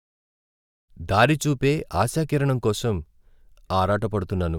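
Nothing here sounds wrong; the speech just eases in gently at the start, the way an editor would bring it up.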